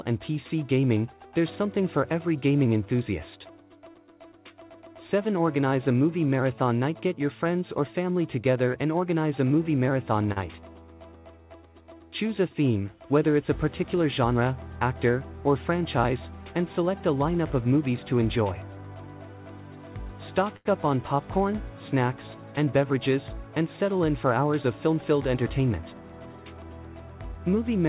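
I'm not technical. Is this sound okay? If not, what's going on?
No, there are two kinds of glitches, each happening twice.

Short stall from a late packet: at 10.32 to 10.38 s and again at 20.56 to 20.67 s, a piece of audio arrived late over the network, and the receiver had nothing ready to play. It held the last bit of sound for 40 ms the first time and 88 ms the second, then carried on where it left off. Nothing is lost, but the sound briefly hangs, with a faint buzz or dip.

Jitter buffer speed-up: from 13.81 to 14.42 s and from 24.64 to 25.36 s, the receiver had built up more waiting audio than it wanted, so it trimmed out many tiny slices to catch up, removing roughly a twentieth of a second the first time and a little more the second. Those stretches play about 7% and 9% fast at unchanged pitch, so they sound slightly rushed.

All of this travelled over a phone-quality call link that carries nothing above 4 kHz, which gives the whole clip a narrower, telephone-like sound.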